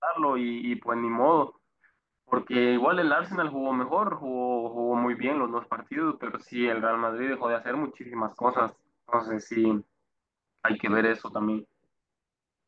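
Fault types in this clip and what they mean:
No technical faults are audible.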